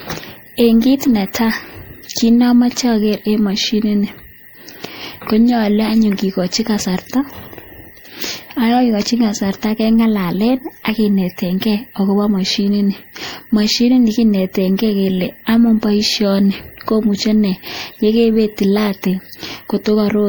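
Repeated MP3 re-encoding, likely about three passes near 64 kbit/s, causes generation loss across the whole speech clip: swirly, hollow, smeared sound with blurred attacks.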